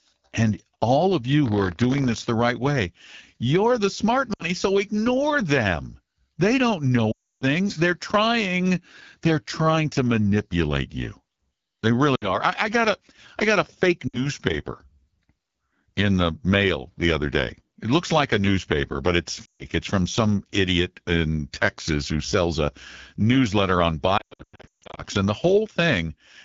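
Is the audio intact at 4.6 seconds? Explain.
No. The audio is right at the tail of a burst of lost AMR speech frames running from 4.33 to 4.61 s. The decoder keeps reusing the last good pitch and vocal tract settings with falling gain, so the sound drops to near silence within two frames, which fits about three missing 20 ms frames. It then comes back weak or rough for a moment.

Underneath that, the whole clip is AMR wideband (HD Voice) coded at 8.85 kbit/s, one of the lowest rates. The pulse-driven model gets coarse there, so the speech has a rough, raspy edge that's plainly audible.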